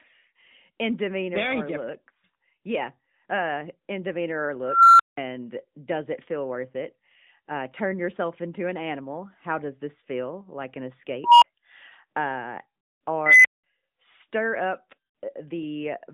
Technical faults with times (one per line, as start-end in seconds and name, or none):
4.65-5.17 unstable filter
11.24-11.44 unstable filter
13.26-13.64 unstable filter